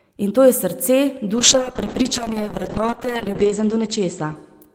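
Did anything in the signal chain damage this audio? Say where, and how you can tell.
Yes, a call bitrate drop at the codec stage: from 1.38 s, just after "to je srce", the speech turns coarse and muffled through the end, with the top band narrowing from 20 kHz to 8 kHz, consistent with the encoder falling from roughly 32 to 7 kbps, its lowest rate holding for about 1.9 s.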